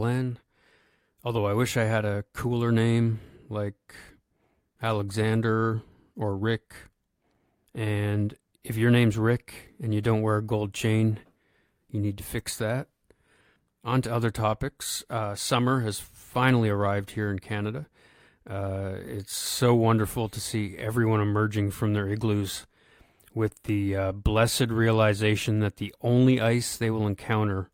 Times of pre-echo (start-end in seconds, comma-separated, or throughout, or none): none